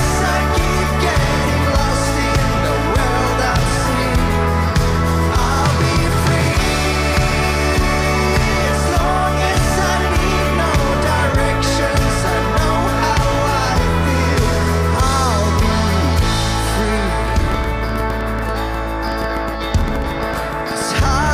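From 17.52 s to 21.32 s a train of clicks sits over the audio: around thirty similar pulses at about 8.2 per second, irregularly spaced, peaking a few decibels above the signal. They are likely interference from nearby equipment or a faulty connection or power supply.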